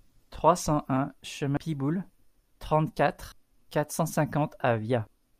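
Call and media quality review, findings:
Speech skips forward at 1.57, 3.32 and 5.07 s, roughly a third of a second gone each time. Audio missing between chunks, likely at recorder chunk boundaries of about 2 s. Sides butt-joined, no silence or fill, and regular spacing, unlike random network dropouts.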